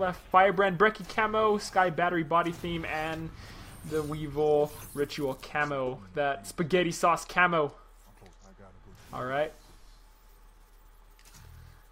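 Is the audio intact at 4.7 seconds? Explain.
Yes, the audio is intact at 4.7 seconds, with no fault of any kind at that moment.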